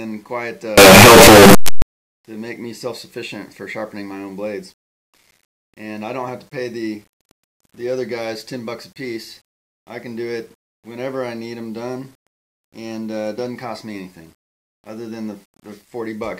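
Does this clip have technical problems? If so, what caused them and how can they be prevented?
Yes: from 0.78 to 1.82 s it blasts into harsh, very loud distortion, quiet bits included, likely signed and unsigned mixed up, flipping the top bit of the 8-bit samples. To prevent it, tag the sample format explicitly and check it wherever data changes hands.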